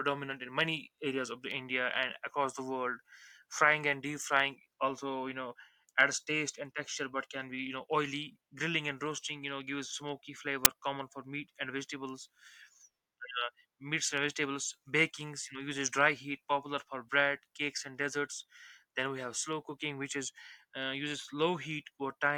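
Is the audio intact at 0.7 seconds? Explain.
Yes, the speech at 0.7 seconds plays through cleanly, with no dropout, click, distortion or other fault at that point.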